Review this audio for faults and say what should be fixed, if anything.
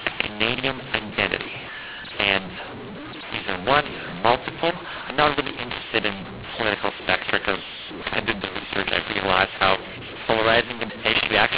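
The decoder is reading the telephone stream with the wrong companding law. The audio was written as G.711 mu-law but decoded as A-law, and this runs through the whole clip. Because the two logarithmic scales map the 8-bit codes to different amplitudes, every sample comes out at the wrong level. Some are too loud and others too quiet, so the speech sounds harsh and distorted. The quietest codes are pushed well above silence, so the pauses fill with noise. The band still stops at 4 kHz, which fits ordinary 8 kHz telephone coding. To prevent this, carry the G.711 law in the stream's metadata or signalling and have the decoder use that law rather than a default.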